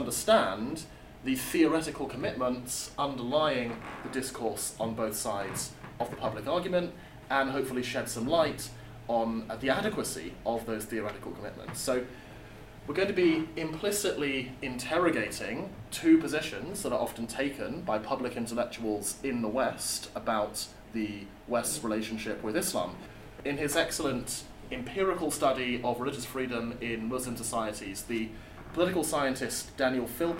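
No technical faults can be heard anywhere in the audio, with the signal holding steady and continuous throughout.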